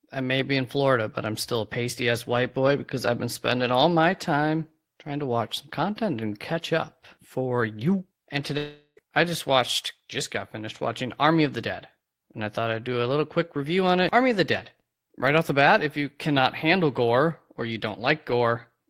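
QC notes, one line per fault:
8.57–8.99 s, long network dropout: the sound cuts out and the gap gets filled with a fading, buzzy continuation of whatever came just before, running for roughly 0.39 s, then about 40 ms of near silence before things pick back up at "I just watched just". Likely a stretch of the stream that never arrived, so around 0.4 s of the original is lost outright rather than delayed, and the filler smears away as it runs out.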